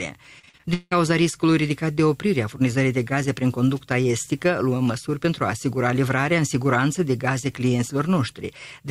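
From 0.39 to 0.93 s there is repeated packet loss, giving a robotic sound. Six gaps in quick succession, the longest 176 ms, are each patched by extending the preceding audio. About 59 percent of that stretch is concealed, so the audio turns choppy with pieces missing.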